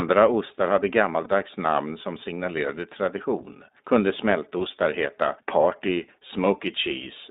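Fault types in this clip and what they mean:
iLBC codec: narrowband speech coding passing only about 200 Hz to 3.7 kHz, with plainly audible rough, synthetic coloration, which fits 15.2 kbps with 20 ms frames.
lost iLBC frames: three single-frame dropouts at 1.24, 4.58 and 6.28 s, each concealed as a brief held buzzy or breathy vowel before recovering almost at once.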